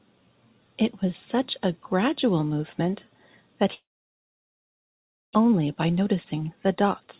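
From 3.74 to 5.37 s, a long network dropout is the likely cause: packets stopped arriving and about 1 s of speech was lost. The receiver briefly carries the last sound on as a fading buzz, then leaves about 1.5 s of silence before speech resumes, skipping the lost part.

From 5.45 to 7.16 s, the jitter buffer speed-up trims short pitch-period slices to shed the backlog from the late packets. About a fifth of a second is removed, so speech runs 10% faster at unchanged pitch and sounds hurried, with nothing above 4 kHz.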